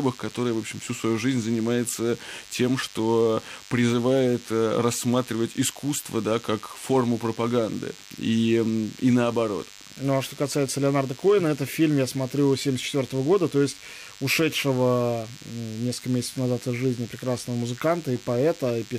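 DECT cordless phone buzz runs from start to finish beneath the speech. A DECT handset or base station close to the recording gear transmits a brief radio burst every 10 ms, and somewhere in the audio chain a junction rectifies that RF energy into the signal. The result is a thin, steady buzz repeating at 100 Hz, rich in harmonics, sitting roughly 20 dB below the speech and persisting through pauses.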